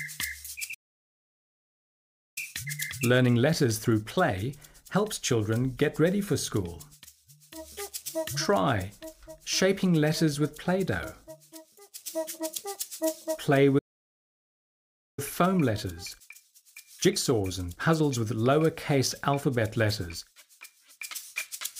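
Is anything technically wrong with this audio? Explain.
Yes, there are two playback stalls and two time-compressed catch-ups. The sound cuts to silence from 0.74 to 2.38 s (about 1.6 s) and again from 13.78 to 15.19 s (about 1.4 s). The likely cause is the player running out of data or its thread being blocked. Unlike a brief dropout, each silence lasts over a second before the sound resumes.

Each stall is followed by a time-compressed catch-up, from 2.38 to 5.38 s and from 15.19 to 18.19 s. The player clears its backlog by cutting out small pieces and cross-fading them, so the audio runs 1.1 times faster for three seconds. The pitch stays normal, which distinguishes it from a speed-up caused by resampling.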